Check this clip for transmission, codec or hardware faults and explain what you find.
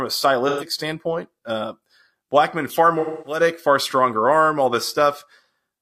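Two smeared patches where the audio goes noisy, phasey or fades, at 0.48 to 0.67 s and 2.99 to 3.41 s. This is AAC frame loss with concealment: the decoder rebuilt missing frames from the last good spectrum. The gaps fit about three and six lost frames.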